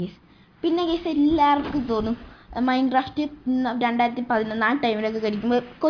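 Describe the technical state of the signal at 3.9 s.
At 3.9 s the signal is intact, with no dropout, distortion, glitch or other technical fault audible at that point.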